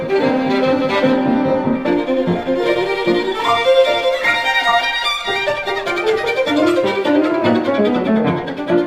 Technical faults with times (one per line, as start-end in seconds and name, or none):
none